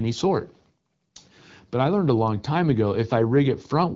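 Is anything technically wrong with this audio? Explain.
No, nothing is technically wrong: the speech has the band-limited character of an AMR wideband (HD Voice) codec running at a rate high enough to keep it clear.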